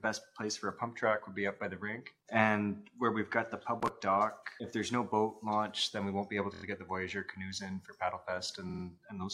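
At 6.53 s the audio stutters: a 23.2 ms block repeats four extra times, through 6.62 s, adding about 93 ms. At 8.69 s a 46.4 ms block, consistent with two compressed frames, plays three extra times until 8.83 s, adding about 139 ms. Both are repeated frames. The decoder receives the same compressed data again and replays it.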